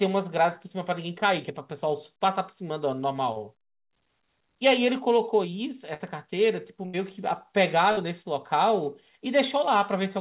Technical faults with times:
3.32-3.38 short concealed packet loss
5.94-6.02 burst of packet loss
6.86-6.95 burst of packet loss
7.91-7.99 burst of packet loss

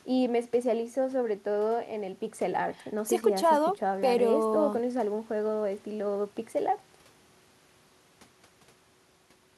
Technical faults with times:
none

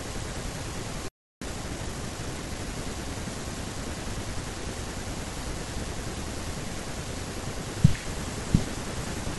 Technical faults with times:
1.08-1.42 playback stall
1.42-2.74 time-compressed catch-up

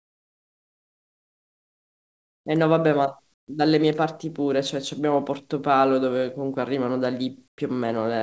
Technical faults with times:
0.00-2.46 comfort noise in place of the background
3.34-3.48 comfort noise in place of the background
7.48-7.58 comfort noise in place of the background

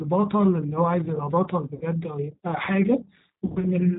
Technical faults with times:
0.00-3.98 G.729 codec
1.75-1.85 VoIP packet loss concealed by the speech codec
3.46-3.68 VoIP packet loss concealed by the speech codec

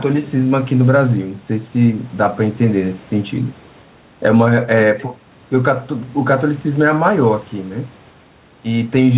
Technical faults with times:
0.00-9.18 gain pumping

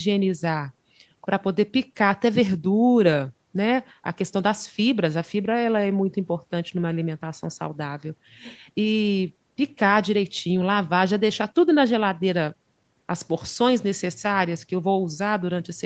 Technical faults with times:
none

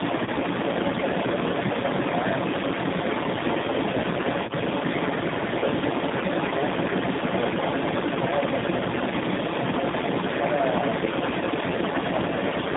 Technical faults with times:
0.00-12.76 tandem speech coding
0.00-12.76 other side's voice leaking through

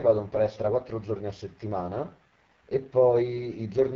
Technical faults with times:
0.00-3.95 AMR wideband (HD Voice) codec

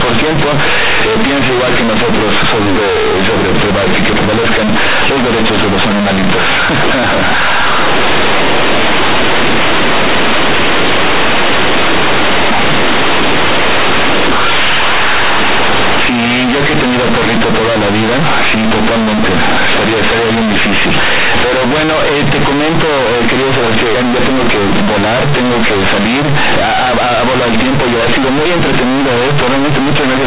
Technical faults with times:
0.00-30.26 companded audio read as linear

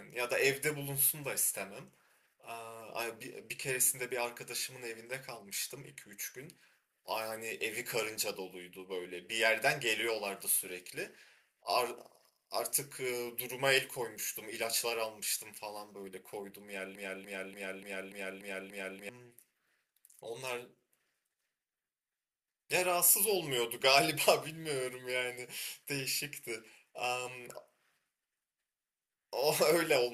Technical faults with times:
16.95-19.09 broken-record loop

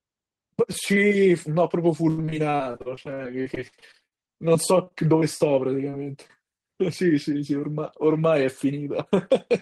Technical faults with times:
2.09-4.93 repeated packet loss (robotic sound)
5.91-6.62 repeated packet loss (robotic sound)
8.17-9.12 jitter buffer speed-up

